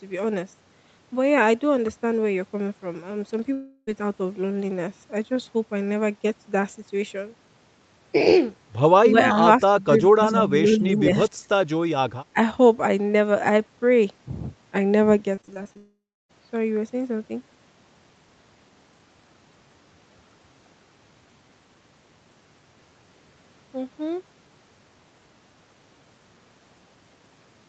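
From 3.53 to 3.89 s, a long network dropout is the likely cause: the speech smears into a fading buzz for about a third of a second, then resumes with that stretch lost.

At 9.06 to 9.37 s, 9.81 to 11.11 s, 11.29 to 11.50 s and 12.33 to 12.37 s, the voice ducks by roughly 10 to 20 dB, likely speech suppressed in double talk. It is a level dip, not the buzz of concealment.

Between 15.35 and 15.77 s, repeated packet loss (robotic sound) brings six short gaps, none longer than 23 ms, patched into a choppy stutter.

This runs straight into what is likely another long network dropout from 15.77 to 16.31 s. A brief buzz gives way to about 0.3 s of silence before the audio returns with the missing half-second gone.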